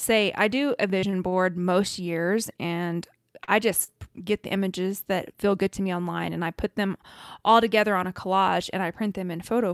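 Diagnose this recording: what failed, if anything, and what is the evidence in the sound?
Short concealed packet loss, at the network stage. At 0.99–1.05 s and 3.84–3.91 s the speech briefly smears. About 40 ms of audio never reached the decoder each time. The receiver continued the last sound for 31 and 42 ms, then blended back.

Short stalls from late packets, in the jitter buffer. At 1.10–1.16 s, 1.29–1.35 s and 3.44–3.51 s a sound is held too long, with a slight dip. The buffer ran empty. The receiver stretched the last sound by 20, 33 and 41 ms until each packet arrived. Nothing is missing.

Jitter buffer speed-up, also in the receiver. From 5.62 to 6.66 s the speech runs about 3% fast at unchanged pitch. The buffer held more audio than its target. The receiver cut short pitch-period pieces, a few tens of milliseconds in total.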